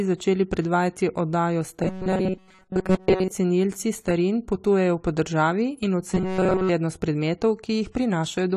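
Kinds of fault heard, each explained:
AAC compression: the whole clip sounds dull and smeared with nothing above 14 kHz, plainly audible damage that likely comes from low-bitrate AAC-LC at around 32 kbps.
robotic sound from repeated short buffers: twice, after "začeli predvajati oddajo" and "potujejo po državi in", a rigid 188 Hz buzz appears, likely from roughly 5 ms chunks repeated.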